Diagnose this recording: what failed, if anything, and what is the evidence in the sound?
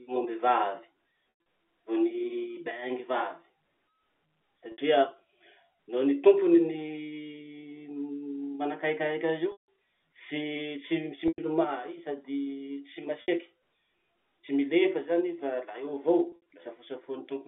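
Network packet loss with pitch repetition occurs at 1.3–1.46, 4.72–4.78, 9.52–9.68, 11.28–11.38, 13.22–13.28 (just after "sady tsy") and 16.3–16.46 s. The receiver fills each gap, with 60–160 ms lost per event, by looping the last pitch period. A spectrogram shows frozen horizontal harmonics, and the waveform shows identical repeating cycles that decay before cross-fading back into the sound.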